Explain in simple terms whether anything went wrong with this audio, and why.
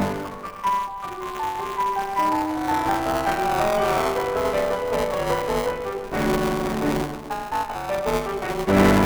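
The program feeding sound to the playback hardware and the hardware reading it have slipped out of step, so they collide inside every small chunk of audio. This is buffer tearing, and it lasts the whole way through the music. In each chunk, a small slice, around a sixth, is stale audio from roughly a hundredth of a second earlier, spliced in with abrupt joins. Repeating 200 times a second, those joins add a robotic buzz over the music.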